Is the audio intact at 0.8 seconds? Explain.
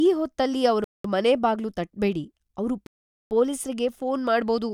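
No. Just after 0.8 s, the speech cuts out completely from 0.84 to 1.05 s, a gap of about 0.2 s, and then carries on. This fits a Bluetooth stall, most likely radio interference holding up packets until the headphones' buffer emptied and playback waited for the resent data. Unlike a short codec dropout or packet-loss concealment, which leaves a click or a smeared, warbling patch, this gap is clean, total silence.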